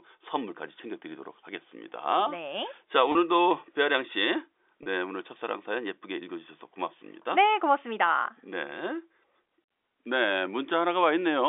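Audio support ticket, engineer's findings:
Packet loss with pitch repetition at 3.12–3.15 s and 4.83–4.86 s. Brief held, buzzy sustain where receiver concealment loops the last pitch period across a 30 ms gap. The length points to one dropped packet each time. Component: network path and receiver jitter buffer.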